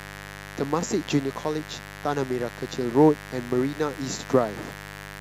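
Speech with a steady mains buzz running under it from start to finish, sitting fairly loud, not far below the voice. It's a raspy 50 Hz buzz, with switching spikes from a dimmer, rectifier or missing shield stacking harmonics up into the kilohertz range.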